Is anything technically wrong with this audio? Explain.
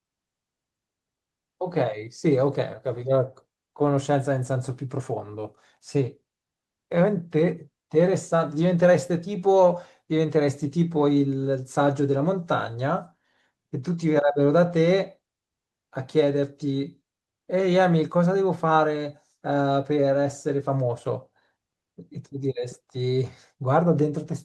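No, nothing is technically wrong with this audio.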